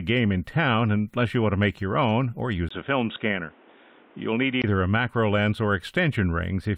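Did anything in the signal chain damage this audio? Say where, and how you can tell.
Yes. From 2.69 to 4.64 s the speech loses everything above 3.8 kHz, with a 20 ms gap, a new noise floor roughly 30 dB below the speech and no change in level, likely an input device switch rather than a codec bandwidth drop.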